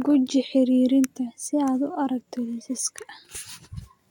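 Nothing in this recording stands out as a technical fault at any point; it's just a short bit of speech that runs along without any glitch worth pointing to.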